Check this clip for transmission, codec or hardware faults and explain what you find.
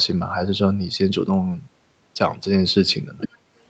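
One fault stands out in this speech. Other side's voice leaking through, 3.18 to 3.38 s: a faint second voice roughly 10 dB under the talker, likely loudspeaker echo the canceller missed.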